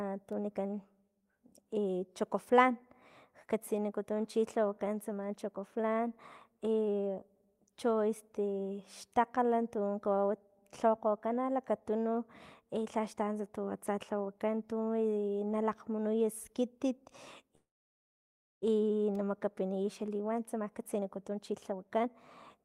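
At 17.55 s the speech stops dead: the last sound carries on as a brief fading buzz, then nearly a second of silence, until the talker resumes at 18.64 s with nothing lost. This is a call audio freeze, likely from packets stalling in transit so the jitter buffer ran empty and the receiver padded the gap.

From 19.62 to 22.08 s the speech sounds hurried at an unchanged pitch, running at about 118% speed, and a final burst from 22.58 to 22.65 s runs at about 158%. This is jitter buffer speed-up: the receiver trimmed tiny pitch-period slices, roughly 0.4 s in total, to drain the backlog.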